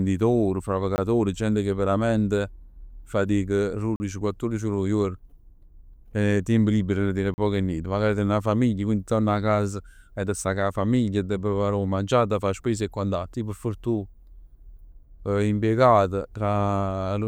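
Output buffers likely went unfilled, leaving blocks of digital silence at 0.96–0.98 s (20 ms) and 3.96–4.00 s and 7.34–7.38 s (40 ms each). The speech drops abruptly to silence.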